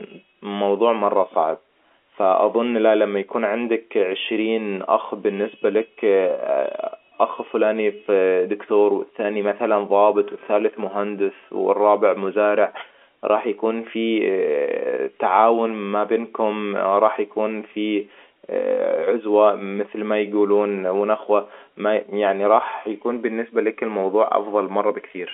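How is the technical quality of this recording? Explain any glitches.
No glitches can be heard; the speech is carried at telephone bandwidth through G.711 coding, with the band limited to roughly 250 Hz to 3.4 kHz.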